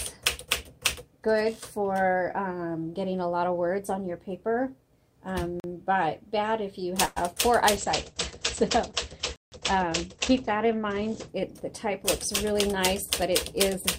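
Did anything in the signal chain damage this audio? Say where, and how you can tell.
Yes. Four kinds of fault are audible.

Block of digital silence, at 5.60 to 5.64 s (40 ms) and 9.36 to 9.52 s (160 ms). This happens at the driver or buffer stage. The signal drops straight to silence and returns with no fade. The output buffer probably wasn't filled in time, so both gaps are heard as holes in the sound, the longer one more obviously.

Call audio freeze, at 7.05 to 7.18 s. This comes from network and call processing. About 110 ms of sustained, fading buzz or hiss is inserted, and then the audio resumes exactly where it stopped, with nothing missing. The likely cause is delayed packets emptying the jitter buffer, so the receiver stretched the last sound to fill the wait.

Call bitrate drop, from 7.78 to 13.69 s. This is a codec-stage fault. The sound turns rough and muffled as the rate falls from 128 to 13 kbps and the bandwidth narrows from 20 kHz to 8 kHz. 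It stays at the lowest rate for 2.99 s before recovering.

Jitter buffer speed-up, from 12.44 s to the end. This is call processing. The audio runs about 103% fast at unchanged pitch. Surplus buffered audio was being removed in repeated short pitch-period cuts to reduce the delay.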